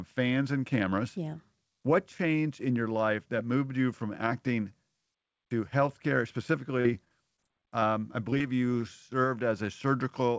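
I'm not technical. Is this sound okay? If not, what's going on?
No, there are a few short glitches, all between about 6.8 and 8.8 seconds.

Right after "to healthcare", from 6.78 to 7.40 s, there's repeated packet loss, which gives a choppy sound. Five small chunks of audio never arrived, the longest about 39 ms. Each time the call software papered over the hole by stretching the previous sound.

From 7.48 to 7.85 s there's a jitter buffer slow-down. The software was short on audio it had stored up, so it repeated tiny slices to buy time. That stretch plays at about 92% speed, adding about 36 ms, with the pitch unchanged, so it sounds slightly drawn out.

There are also short concealed packet losses, at 7.81 to 7.84 s and just before "you served" at 8.31 to 8.43 s, where a second drop lands at 8.39 to 8.42 s. Each time about 20 ms of sound went missing and was patched over, leaving a quick smear or wobble.

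At 8.81 to 8.84 s there's a short stall from a late packet. A piece of audio showed up late, so the last sound was held about 17 ms too long before carrying on. Nothing is lost, but you may hear a tiny hitch.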